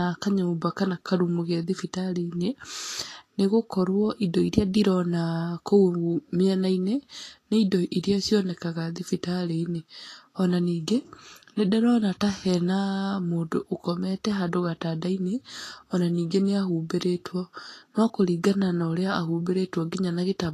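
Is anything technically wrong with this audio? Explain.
Yes. Throughout the speech, nothing remains above 14.2 kHz and the treble sounds hissy and grainy, likely from Vorbis compression near 33 kbps turning high-frequency detail into noise.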